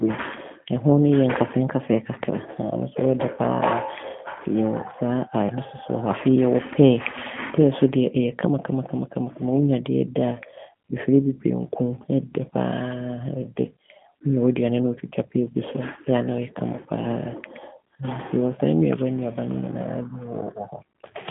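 Throughout, a G.729 codec rebuilds the speech from a vocal tract model, so nothing above 3.8 kHz survives, leaving it thin, rough and synthetic.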